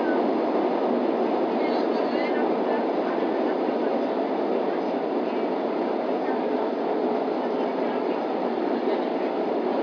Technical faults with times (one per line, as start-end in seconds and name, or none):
none